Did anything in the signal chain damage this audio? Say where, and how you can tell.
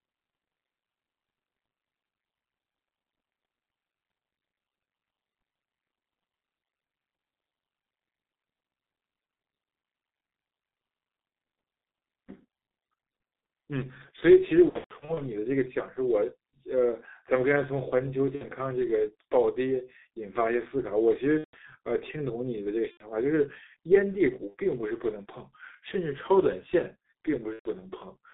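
Yes. At the codec stage, heavy G.723.1 coding runs through the whole clip: the speech is confined to roughly 200 Hz to 3.7 kHz, muffled and hoarse, with smeared consonants. That fits a 6.3 kbit/s coder working in 30 ms frames and adapting its voice model slowly.

On the network side, VoIP packet loss concealed by the speech codec appears at 14.69–15.21 s, 18.35–18.44 s, 21.38–21.57 s, 22.91–23.12 s, 24.47–24.55 s and 27.53–27.69 s. The decoder extrapolates from the last pitch and filter into a buzzy tone or coloured noise that fades, and the speech stays weak briefly after each gap.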